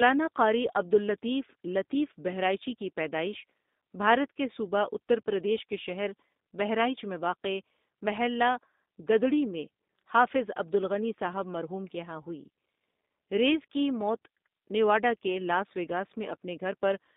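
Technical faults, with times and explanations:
Throughout, G.729 codec: the speech sits in a narrow 200 Hz to 3.7 kHz line band and sounds rough and synthetic, consistent with an 8 kbit/s G.729A link rebuilding each 10 ms frame from a vocal tract filter, pitch predictor and sparse pulses.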